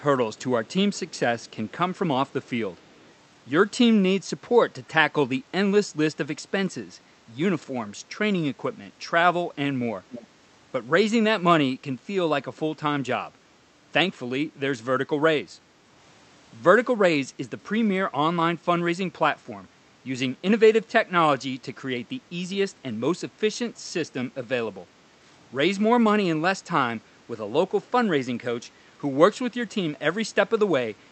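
Between 0.37 and 3.13 s, faint delayed copies of the speech trail the talker in short scraps at 0.37–0.42, 0.66–0.73, 0.95–1.19, 1.4–1.71, 2.28–2.49 and 2.77–3.13 s, sitting far below the direct sound. This is an echo leak, likely from a far end playing the call on a loudspeaker whose echo canceller let part of the microphone pickup through. Each copy lags by 307 ms. A stronger scrap at 10.1–10.26 s stands out at about 15 dB below the speech.

At 24.86–24.96 s the room sound dips by about 6 dB for roughly a tenth of a second and then recovers. This is background gated by the echo canceller: while its loudspeaker played, the canceller pulled the microphone gain down and briefly thinned the ambience. The audio throughout carries Opus coding, with content stopping near 8 kHz.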